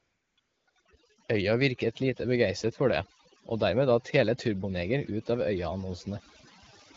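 From the start, AMR comfort noise fills the gaps at 0.00 to 0.37 s, 0.39 to 0.67 s, 0.69 to 0.75 s and 0.81 to 0.85 s. The phone stopped sending speech frames, so the receiver synthesised a smooth, steady hiss that switches on and off. A spectrogram shows flat, uniform noise blocks with hard edges.

Throughout the clip, overdone noise removal pulls individual frequency bands down whenever they sit near the noise estimate, taking quiet speech detail with them. The background drops and breaks up into twinkling specks. On a spectrogram this appears as scattered isolated specks and ragged, holed harmonics.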